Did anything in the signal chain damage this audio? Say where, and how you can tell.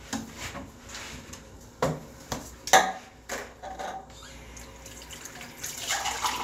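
No, nothing in the signal chain damaged this audio.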